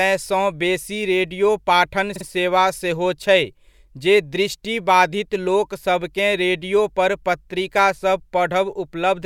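A run of compressed frames in this speech clip was delivered more than once, giving repeated frames from 2.15 to 2.25 s, between "बेसी रेडियो पाठन" and "सेवा सेहो छै". A 48 ms block plays two extra times, heard as a brief stutter, stretching the audio by 96 ms.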